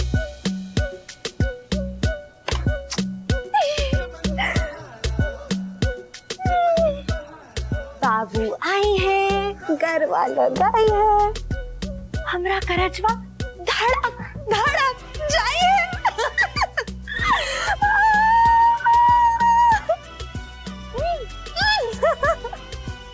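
No technical faults are audible in this audio.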